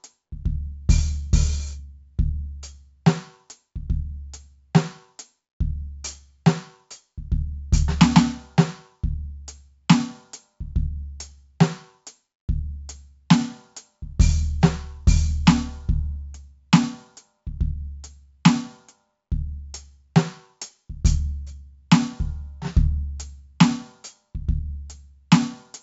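Throughout, heavy 4-bit ADPCM compression adds gritty hiss that rises with every loud passage and distorts sharp attacks, unlike swirly MP3 artefacts; nothing above 7.7 kHz fits a 16 kHz rate.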